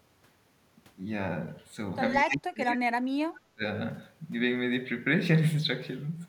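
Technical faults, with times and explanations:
2.15 to 2.36 s and 2.61 to 2.66 s, echo leak: a faint delayed copy of the speech trails the talker by 178 ms, sitting roughly 15 dB below it in the first scrap and roughly 20 dB below in the brief second one. This is likely a loudspeaker on one end feeding its microphone, with the echo canceller failing to remove all of that pickup, so part of it returns down the line.
2.25 to 3.63 s, speech suppressed in double talk: the talker's level sags and breaks up in patches while the other side is also talking, dipping by up to roughly 35 dB at its deepest and affecting around one and a half seconds in all, so the speech sounds hollowed out and gated. The likely cause is an echo canceller that cannot tell its own talker apart from the loudspeaker echo during overlapping speech, and so attenuates both together.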